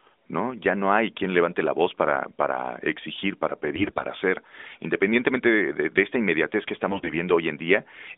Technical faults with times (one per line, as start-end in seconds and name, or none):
3.76-4.06 AMR bit errors
6.90-7.17 AMR bit errors